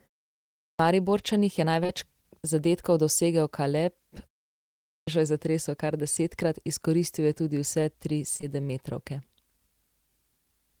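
At 0.59 s, right after a short pause, there's a clipped start after a pause: the playback device had dozed off in the silence and took about 0.2 s to come back, so the sound begins abruptly with its onset gone. Around 1.83 to 1.91 s comes a short concealed packet loss, two back-to-back 20 ms chunks missing, patched by extending the preceding sound and blending back, heard as a quick smear. At 4.84 s the clipped start recurs, eating about 0.23 s before "je zatresel kar desetkrat". Another concealed loss of two 20 ms gaps shows up at 8.37 to 8.44 s, again a brief wobble.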